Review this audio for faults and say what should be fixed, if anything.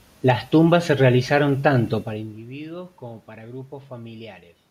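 Nothing needs fixing, since no system fault can be heard in this speech. The room noise belongs to the recording, and the change in level around 2 s is the talker moving relative to the microphone.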